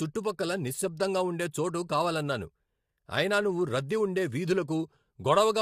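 Speech, compressed throughout by what is likely low-delay AAC compression (AAC-ELD), whose short frames resolve pitch harmonics poorly at a rate that fits roughly 32 kbps. The damage is plainly audible: the voice sounds rough and grainy, with noise filling between harmonics and a thinned top band.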